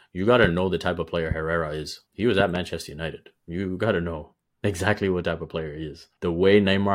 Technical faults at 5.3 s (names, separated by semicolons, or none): de-emphasis applied wrongly